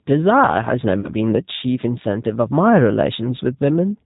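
G.729 codec coding runs through the whole of this speech recording: nothing above 4 kHz survives, and the voice has the slightly rough, synthetic edge of a low-rate model-based coder. The sound points to G.729A at about 8 kbit/s, where each 10 ms frame is rebuilt from a vocal tract filter, a pitch predictor and a handful of pulses, so the fine detail of the original waveform is plainly lost. VoIP packet loss concealed by the speech codec occurs from 0.99 to 1.10 s. About 40 ms of audio is missing, which fits two lost packets. The decoder fills the gap by repeating its last pitch and filter settings at falling gain, so the voice smears into a buzzy tone or coloured noise that fades, instead of dropping to silence. Because each frame depends on the one before, the sound stays weak or distorted for tens of milliseconds or more after the audio resumes.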